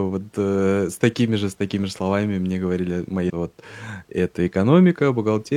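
At 3.25 to 3.30 s, damaged data in a compressed stream makes the decoder lose sync, giving a brief chirp, squawk, click or short hole; spectrograms show a short broadband smear, waveforms a jagged discontinuity.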